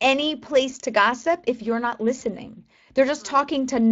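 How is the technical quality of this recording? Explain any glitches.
The recording has two technical faults: coding damage from the Speex codec across the whole clip, and one brief dropout concealed by the decoder.

Speex codec, throughout: This CELP speech codec rebuilds the voice from a filter and an excitation signal, and here the excitation is coded coarsely, in a way that fits a bitrate of around 20 kbps. The damage is plainly audible: the speech has a grainy, hoarse, noisy texture, because the fine detail of the voice is approximated rather than carried.

VoIP packet loss concealed by the speech codec, 2.19 to 2.24 s: Audio data went missing, which points to a single lost 20 ms frame. The decoder filled the gap by extending its last pitch and filter settings at reduced gain. The result is a short stretched, fading patch. Because each decoded frame builds on the previous one, the sound stays weak or distorted for tens of milliseconds after the data resumes.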